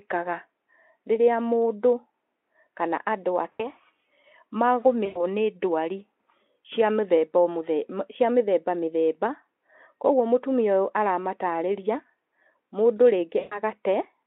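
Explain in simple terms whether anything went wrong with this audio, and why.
Three brief dropouts turn the speech into a fading, stretched sound: at 3.52–3.71 s, 5.05–5.22 s and 13.39–13.6 s. This is VoIP packet loss concealed by the speech codec. Roughly 80, 100 and 120 ms of audio went missing, and the Speex decoder filled each gap by stretching the last sound it had.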